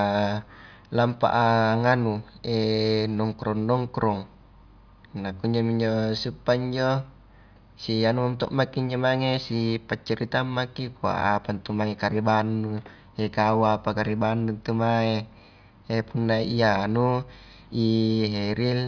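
Speech recording, no audible faults.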